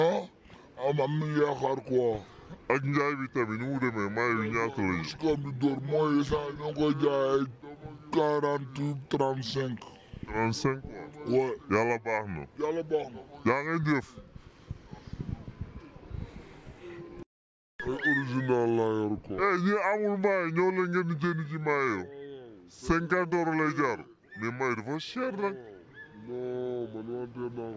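From start to end the clip has a wrong sample rate fault: everything runs at two-thirds speed and sits about 7 semitones low, which fits 24 kHz audio played at 16 kHz without conversion. On a spectrogram all features shift downward and stretch out in time.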